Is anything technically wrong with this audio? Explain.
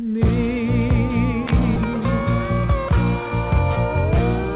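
Yes, there's a jitter buffer speed-up from 3.21 s to 4.55 s. The receiver snipped out tiny pitch-period chunks, about a tenth of a second in total, so the sound runs roughly 7% faster at unchanged pitch and feels slightly rushed. The band stops at 4 kHz, which fits a G.711 mu-law call path.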